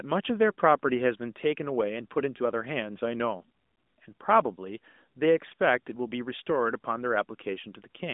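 No technical faults can be heard in the speech, which comes through an AMR narrowband mobile codec with nothing above about 3.8 kHz.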